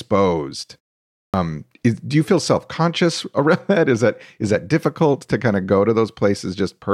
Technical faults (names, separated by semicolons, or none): clipped start after a pause